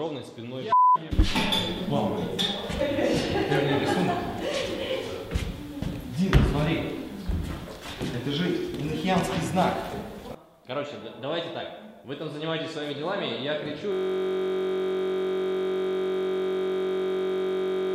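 System hang loop from 13.92 s to the end: playback freezes into a steady buzz at about 46.9 Hz as one 21.33 ms slice of audio repeats nearly 190 times, which fits a stalled system leaving the sound hardware cycling a 1024-sample ring buffer.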